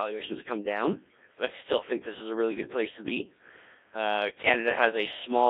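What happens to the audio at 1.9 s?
The speech at 1.9 s passes through a Codec 2 vocoder, as it does for the whole clip. Only pitch, voicing, energy and spectral shape survive, rebuilt from sine waves. The result is heavily robotic and buzzy, which fits a rate near 1.3 kbit/s, confined to 300 Hz–3.6 kHz.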